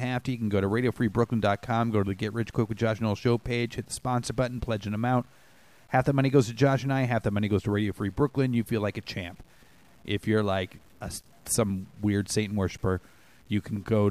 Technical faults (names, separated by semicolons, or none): low bit depth without dither